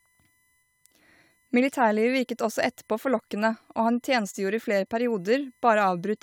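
A speech recording with USB whine running under it from start to finish: a steady, fixed-pitch tone built on a 1 kHz fundamental, with its strongest component at the 2 kHz harmonic, sitting roughly 45 dB below the speech. The 1 kHz spacing matches the USB bus's 1 ms frame rate. Current drawn by the interface in step with those frames couples into the audio path through the shared power or ground.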